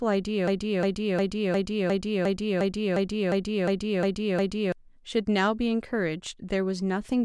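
A short fragment of speech, about 356 ms long, repeats exactly twelve times from 0.48 to 4.72 s, a broken-record loop that likely comes from a stalled player or stream, losing the audio in between.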